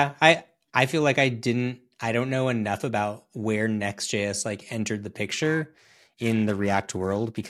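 From 5.28 s to the end at 7.49 s, the converter's sampling clock is wobbled by interference at around 500 Hz. This periodic clock jitter places sidebands about 500 Hz above and below every component of the speech, strongest on higher frequencies, giving a rough, metallic edge.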